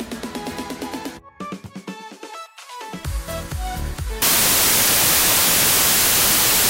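From 4.22 s to the end, the reader assembles each sample from the wrong bytes, misaligned or in swapped order, so the rapidly changing low bits land in the most significant position. The sound there turns into loud, harsh broadband noise.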